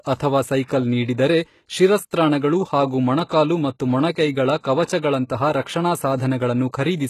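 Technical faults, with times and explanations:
Throughout, HE-AAC compression, likely: the speech has plainly audible codec damage, with nothing above about 12.3 kHz and a treble that sounds bright but synthetic. The sound points to a low-rate setting around 16 kbps. At that rate the codec carries only the lower spectrum and fills the top by spectral band replication, copying lower bands upward under a coarse envelope. The copied harmonics fail to line up across the crossover, so s sounds turn gritty, metallic or lispy.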